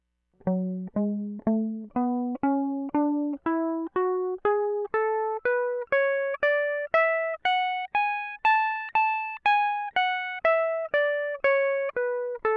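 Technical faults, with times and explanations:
No technical faults can be heard anywhere in this music clip, and the signal holds steady for its whole duration.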